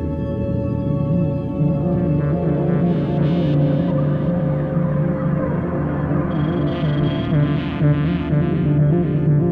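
No technical faults can be heard anywhere in this music clip, and the signal holds steady throughout.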